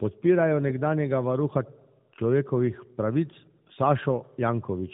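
A speech clip that suffers from tandem speech coding from start to finish. It has passed through two AMR-NB-style speech coders in a row, with a plain mu-law telephone link between them, so the second coder had to re-encode the first one's artefacts. That stacking explains why it sounds rougher, more muffled and more warbly than a single narrowband pass would, which fits AMR-NB at 12.2 kbit/s twice. A simple band-limit would sound merely dull, and here nothing above 3.7 kHz survives.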